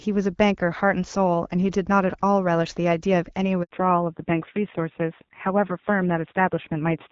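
At 3.63 s there's a handover gap: the call hops networks and no speech frames arrive for about 80 ms, so the voice cuts out abruptly and whatever was said in that stretch is simply gone until the new link picks up at 3.71 s.

Right after that, from 3.71 s to the end, you get a fallback to narrowband. Up to the gap it sounds like fairly clean HD Voice, which fits AMR-WB at a mid rate. After it, nothing comes through above 4 kHz, so the speech turns duller and rougher. That fits a low-rate narrowband AMR mode, around 5.9 kbit/s.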